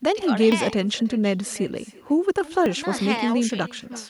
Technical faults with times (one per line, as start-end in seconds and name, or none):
0.00-4.09 echo with no canceller
0.52 dropped buffer (overrun)
2.66 dropped buffer (overrun)
3.50 dropped buffer (overrun)